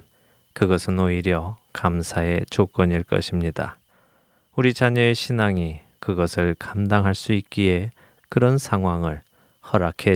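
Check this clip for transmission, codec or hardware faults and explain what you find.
No faults can be heard anywhere in the recording. The speech runs on without any event that would need explaining.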